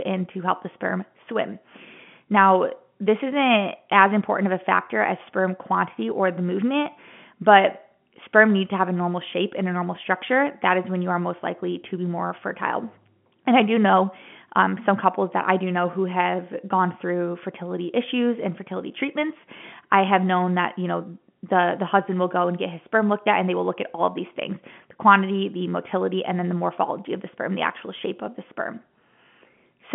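No faults in this speech; the telephone-band path sits at roughly 150 Hz to 3.4 kHz with nothing above about 3.7 kHz, as expected for mu-law at 64 kbps.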